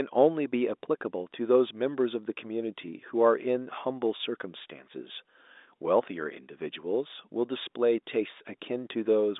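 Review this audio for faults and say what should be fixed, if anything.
Nothing needs to be fixed, because the review turns up no faults in this audio.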